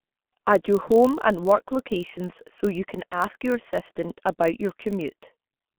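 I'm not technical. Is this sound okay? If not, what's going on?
No, there are a few problems. First, this speech went through the G.723.1 codec, an old internet-phone format that keeps only a narrow band of sound. That's why the voice is muffled, hoarse, with smeared consonants.

Second, there's a block size mismatch (padded): one step hands over shorter chunks than the next expects, and the gaps get filled with silence. You hear that as a steady low buzz around 47 Hz throughout.

Third, around 3.11 to 3.19 s, between "locations so you can" and "your assistant about your", a bit of the call dropped out. The decoder filled that hole by guessing, which is VoIP packet loss concealed by the speech codec, so the sound is briefly stretched out and fades there.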